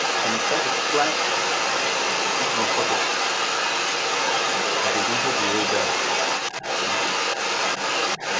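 From 0 to about 8 s, the other side's voice leaking through runs under the speech for the whole clip, and it sits loud, roughly 5 dB above the talker. The cause is likely residual echo: the far end played on the device's loudspeaker and returned to the microphone without the echo canceller removing it. It competes directly with the near voice. Both voices stop at 8 kHz, which fits a wideband G.722 call.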